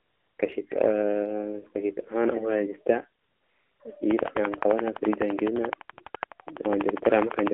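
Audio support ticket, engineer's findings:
AMR narrowband mobile codec, whole clip: speech squeezed into roughly 250 Hz to 3.4 kHz, clearly buzzy and synthetic. The damage level fits the 7.4 kbps AMR-NB mode. Pulse-driven vocal-tract model, nothing above 4 kHz.

AMR comfort noise, 0 to 0.38 s and 3.22 to 3.8 s: smooth, steady hiss that switches in and out. The phone called these stretches silence and stopped sending speech frames, so the receiver synthesised the filler.

Train of clicks, 4.11 to 7.48 s: evenly spaced ticks at 11.9 per second, about forty of them, sitting around 20 dB above the speech. Likely interference from nearby equipment or a struggling interface.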